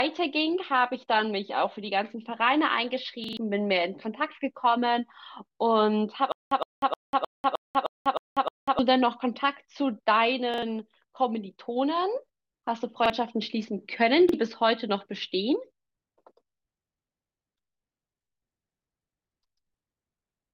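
Repeated buffer at 3.24–3.37 s, 10.54–10.62 s, 13.06–13.10 s and 14.29–14.34 s in this speech recording: a 43 ms chunk, which fits a 2048-sample buffer, replays up to three extra times with hard joins, as late data leaves the device looping its last buffer. Stutter with silent gaps from 6.32 to 8.79 s: a 114 ms burst returns eight times every 309 ms with 195 ms of digital silence between, likely a stalled stream replaying its last fragment on each retry.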